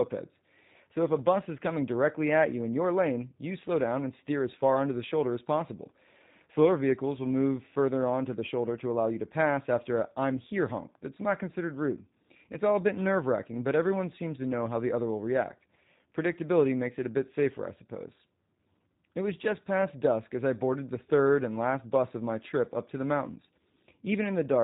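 The speech has passed through the G.729 codec, and the band limit and roughness fit its 8 kbit/s mode. It resynthesises each 10 ms frame from a vocal tract filter, pitch predictor and a few pulses, so nothing above 4 kHz survives and the whole clip sounds plainly muffled, buzzy and synthetic.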